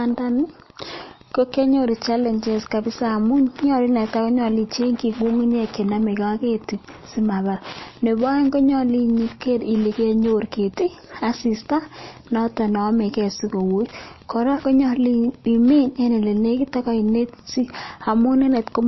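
Wi-Fi interference runs throughout, a faint ticking roughly ten times a second, about 30 dB below the speech, seen as thin vertical lines spaced 102.4 ms apart. Also throughout, the speech sounds watery and swirly, with nothing above 5.8 kHz, a flat spectrogram ceiling. This is likely MP3 compression at a bitrate near 27 kbps.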